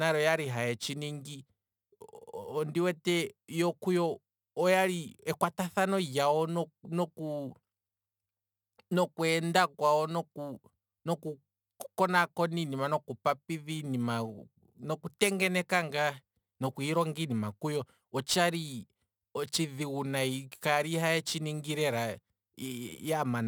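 From start to finish the speech carries a crude rate conversion: samples were simply dropped to the nearest neighbour rather than filtered. The dropping repeats in a fixed pattern, and the fizz fits a 48 kHz to 44.1 kHz change. That pattern throws off shifted, inharmonic copies of the speech, sitting roughly 25 dB down, so you hear a gritty, inharmonic buzz riding on louder syllables and bright sibilants.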